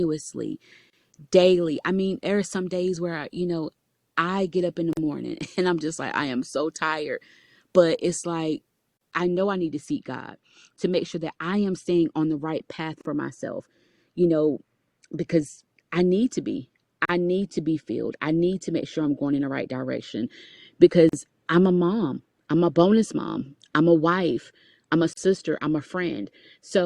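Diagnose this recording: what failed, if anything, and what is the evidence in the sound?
Short dropouts cut into the speech at 0.90 s (about 30 ms), then at 4.93, 8.97, 13.01, 17.05, 21.09 and 25.13 s (about 40 ms each), exactly every 4 s. This is a gap at a join of encoded pieces: separately encoded segments were spliced with their encoder start delay and last-frame padding left in.

From 9.20 s to the end the speech turns dull and muffled, the treble falling smoothly to about 8 dB down at 10 kHz relative to 1 kHz. This is de-emphasis applied wrongly: a treble-cut filter in the decoding or playback stage acted on audio that had no pre-emphasis to undo, or was applied a second time.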